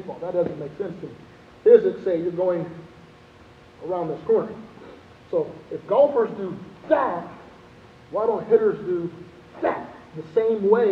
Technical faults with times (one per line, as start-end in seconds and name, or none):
none